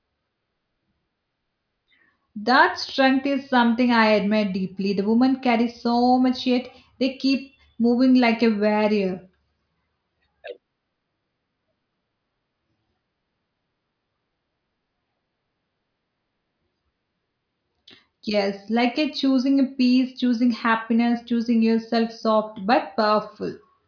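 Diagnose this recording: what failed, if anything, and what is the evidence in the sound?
Nothing failed; no stage shows any audible defect.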